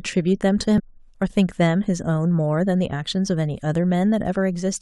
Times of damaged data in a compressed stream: 0.78-0.80

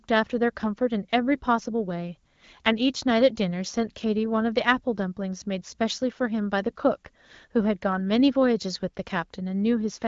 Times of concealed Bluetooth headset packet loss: none

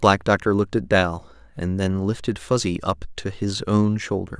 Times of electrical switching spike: none

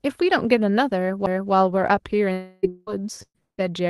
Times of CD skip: 1.26

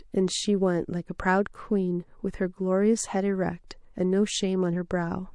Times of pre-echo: 3.67-3.71

